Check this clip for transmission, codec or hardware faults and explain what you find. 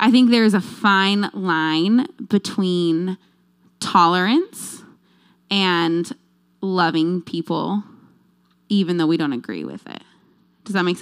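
One transmission fault is present. Bluetooth SBC bit pool drop, 9.69 to 11.02 s, just after "though we don't agree": the link starved the encoder of bits, so upper sub-bands lost their allocation and the rest were coarsely quantised. The treble dulls and gritty noise creeps in, which fits a fall from bit pool 31 to 14, near 99 kbps, lasting to the end.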